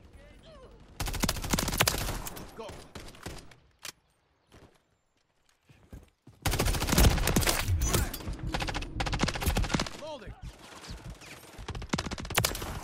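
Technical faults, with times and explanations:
No technical faults occur, so there are no times or explanations to give.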